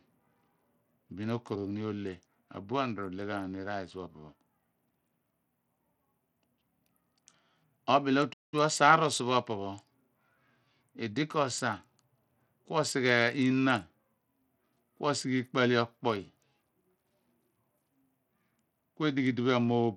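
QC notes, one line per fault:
Throughout: Bluetooth SBC compression, likely from a low bit pool near 80 kbps; treble flickers, gritty grain, spectrogram shows ragged, patchy top bands.
8.33–8.54 s: playback stall, likely buffer underrun; speech halts about 0.2 s then resumes, waveform shows a flat silent gap.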